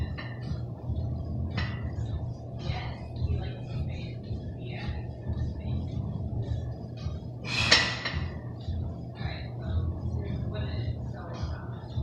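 At 2.04 s there's a call bitrate drop that lasts until about 6.61 s. The bandwidth estimate sagged and the encoder had to squeeze everything into far fewer bits. The top end gets chopped from around 20 kHz down to 12 kHz, so it goes duller, and the coarser coding adds a rough, watery edge. That degradation sounds like a fall from roughly 96 kbps to something near 17 kbps, and it sits at its worst for about 4.5 s before recovering.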